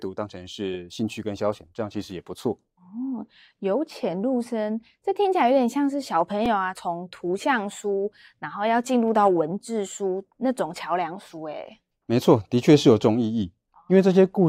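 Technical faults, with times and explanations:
6.46 s, repeated buffer: a tiny slice of the speech, roughly 2.7 ms long, plays three times in a row, with a hard join at each repeat. New audio did not reach the output in time, so the device replayed its last buffer twice before fresh samples arrived. The slice length fits a 128-sample buffer. A piece this short repeating gives a brief click or buzz rather than an audible stutter, and essentially no audio goes missing.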